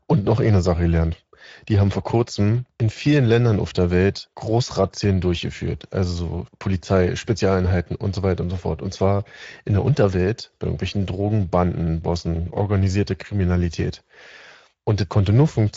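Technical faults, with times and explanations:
Throughout: Speex codec. The speech sounds noisy and hoarse, with nothing above 7.7 kHz. Too few bits reach the excitation, which fits a rate near 17 kbps.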